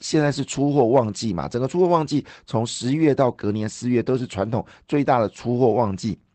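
No technical faults can be heard anywhere in this speech clip. It has passed through a call path whose codec leaves its ordinary coding texture and lets nothing through above about 8 kHz, which fits Opus at around 20 kbps.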